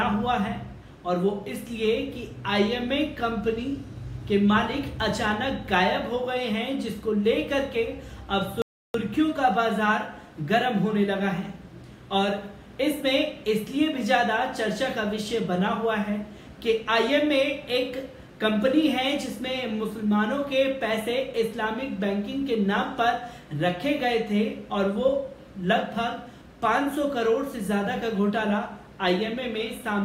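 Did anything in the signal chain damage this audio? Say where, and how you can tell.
Yes: playback likely starved of data or its thread blocked, causing a playback stall. The sound cuts out mid-flow from 8.62 to 8.94 s, 324 ms of silence.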